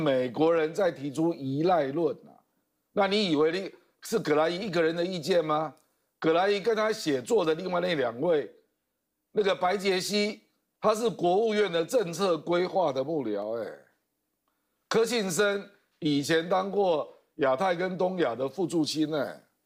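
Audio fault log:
13.42 s, dropped samples: a single sharp click, likely from a fraction of a millisecond of samples going missing, so the waveform jumps abruptly from one value to a later one. The gap is too short to remove audible sound; the spectrogram shows one thin vertical line across all frequencies.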